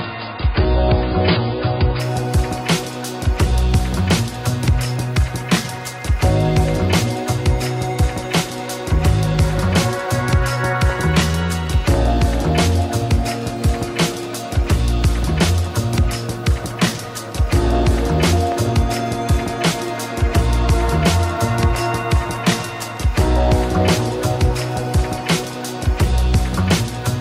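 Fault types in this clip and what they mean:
adaptive stream starting at a low bitrate: the player opened on a low-quality rendition, then switched up once the connection was measured. Until 2.0 s nothing sounds above 5.1 kHz and artefacts are stronger, which fits 16 kbit/s AAC. Treble then arrives abruptly without any gap, unlike a later mid-stream quality drop.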